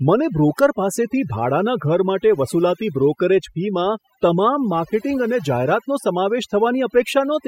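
A short speech recording with overdone noise removal running the whole way through. The denoiser was pushed too hard, so bands near its noise estimate get pulled down or gated out entirely, taking quieter parts of the voice with them. The gaps go near-silent with twinkly specks.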